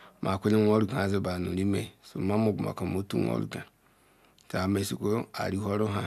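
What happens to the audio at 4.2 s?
Nothing goes wrong at 4.2 s; the speech runs through that point intact, with no dropout, click, distortion or other fault.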